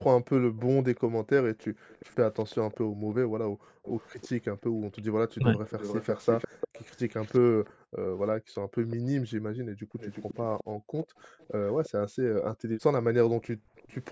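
A speech clip in which, from 0.95 to 13.95 s, a faint copy of the talker trails about 0.35 s behind, roughly 20 dB down. This is most likely an echo leak from a loudspeaker the echo canceller failed to cancel, visible as ghosted, offset spectrogram streaks. The background is gated by the echo canceller at 1.69–1.89 s, 3.5–4.93 s, 7.73–10.92 s and 13.57–13.68 s, with the room floor dropping about 33 dB. On the waveform and spectrogram these appear as sudden dark, near-empty gaps in the noise floor. From 5.38 to 5.61 s the voice dips by around 15 dB, consistent with speech suppressed in double talk, showing as a brief thinned, notched patch within the spectrogram's speech energy.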